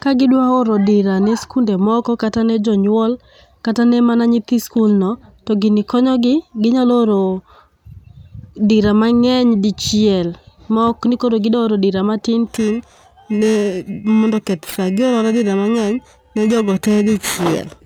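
Right after "koro gidwaoro dira matin", at 12.47 s, periodic clock jitter kicks in and lasts to the end at 17.85 s. Interference wobbles the converter clock at around 2 kHz, putting sidebands around every component of the speech, so it picks up a rough, metallic edge.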